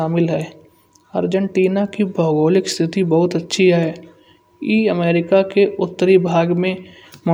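No technical faults can be heard anywhere in the recording.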